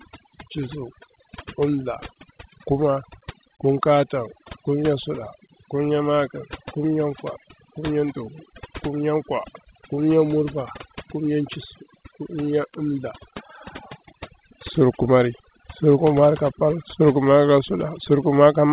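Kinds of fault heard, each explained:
Overdone noise removal: an over-aggressive suppressor shuts off individual frequency bands near its noise estimate, so quiet parts of the voice go with them and the background drops and breaks up into twinkling specks. Unlike the call path's steady 4 kHz ceiling, these losses flicker band by band.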